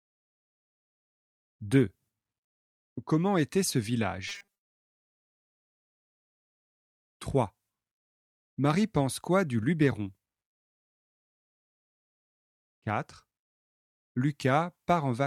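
Between 4.28 and 4.89 s, fresh audio is likely arriving too seldom, so the playback path keeps refilling the gap by looping its most recent short buffer, with roughly half of that stretch made of repeats while the real signal is skipped. Each repeat lasts about 5 ms, which imposes a steady 200 Hz buzz on the audio. That is the robotic sound from repeated short buffers: a stiff, metallic drone that only loosely tracks the underlying sound. At 12.90 s, a tiny run of samples, a small fraction of a millisecond, likely goes missing from the stream, so the waveform leaps straight from one value to a later one. These dropped samples remove nothing audible as content but leave a single sharp click, which shows as a thin vertical line across the spectrum.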